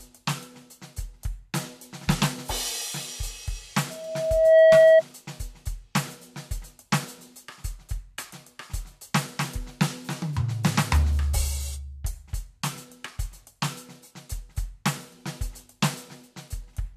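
Loudspeaker feedback squeal, 3.90 to 5.03 s: the microphone re-amplifies its own loudspeaker, so a 643 Hz tone swells over about 0.7 s, roughly 15 dB above the music.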